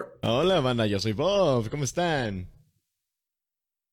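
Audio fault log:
Nothing stood out on listening to this speech recording.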